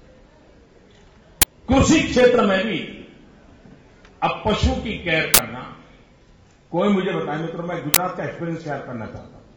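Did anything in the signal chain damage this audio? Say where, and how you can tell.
Yes. An uninitialised buffer at the driver/buffer stage causes noise bursts at 1.42–1.44, 5.34–5.39 and 7.94–7.96 s. Leftover memory was played, and the lengths fit 1024- and 2048-sample buffers.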